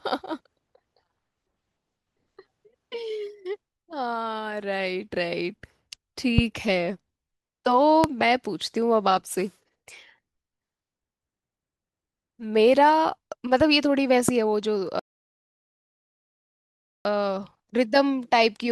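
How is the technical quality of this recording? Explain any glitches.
The recording is marred by three loud pops and one rebuffering stall that briefly interrupts the speech.

Loud pops occur at 6.38–6.41 s, 8.04–8.06 s and 14.29–14.31 s, each a single sharp spike about 15, 20 and 15 dB above the speech. The likely cause is a voltage pulse from a switch, plug contact or static entering the chain. The speech continues underneath, which distinguishes these pops from a cut or dropout.

A rebuffering stall runs from 14.99 s to 17.05 s. The player ran short of downloaded data and paused, so the speech falls to silence for about 2.06 s, then resumes exactly where it stopped. Unlike a dropout, nothing is skipped; the stall only adds time.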